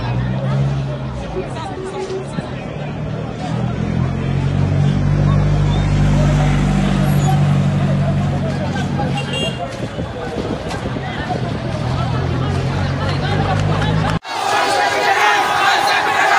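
From 0 to 6.0 s the adaptive stream is starting at a low bitrate: the player opens on a lean encoding, consistent with AAC near 32 kbit/s, so nothing sits above 10.5 kHz and artefacts swirl. At 6.0 s quality jumps gaplessly; the spectrogram ceiling suddenly rises, while the waveform stays continuous.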